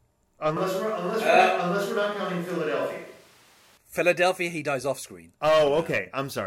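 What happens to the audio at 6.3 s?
Nothing goes wrong at 6.3 s: the speech there plays through intact, with no dropout, click or distortion.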